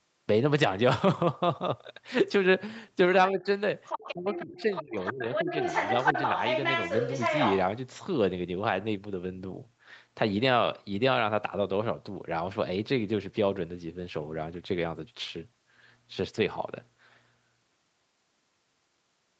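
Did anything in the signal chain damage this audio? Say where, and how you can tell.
Yes. Speech suppressed in double talk at 3.30–3.47, 4.12–5.27 and 5.43–5.51 s: the speech dips by as much as about 25 dB, likely call-processing echo cancellation ducking during overlap.

Other side's voice leaking through at 3.85–4.14 and 4.34–7.58 s: a second voice sits only about 5 to 10 dB under the speech. This is likely loudspeaker echo left behind by the echo canceller.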